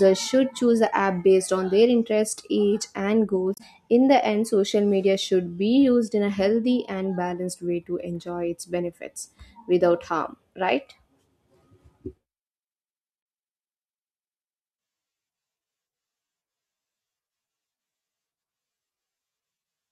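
Damaged data in the compressed stream at 3.54 to 3.61 s, right after "their interest age and": corrupted frames derail the decoder, leaving a brief glitch.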